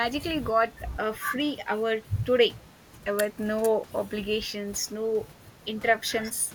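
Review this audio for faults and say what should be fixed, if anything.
Nothing in this speech recording needs fixing. No faults can be heard anywhere in it.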